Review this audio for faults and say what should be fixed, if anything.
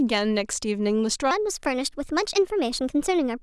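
From 1.31 s to the end, a section at the wrong speed: playback likely switched to a mismatched clock, so this stretch runs about 1.27 times faster than it was recorded. Because speed and pitch are tied together here, the speech jumps up by roughly four semitones and hurries along, sounding thin and chipmunk-like against the natural first part. The fix is to resample that section back to its original rate. Prevent it by confirming that every segment's sample rate matches the playback or project clock before it is joined or exported.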